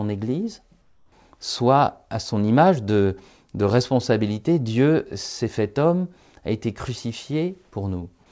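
From 0.82 to 1.12 s, just before "soit à son image", the background in the pause turns into a steady, featureless hiss about 5 dB quieter. This is comfort noise in place of the background, likely from discontinuous transmission, with the receiver synthesising filler noise while the sender was silent.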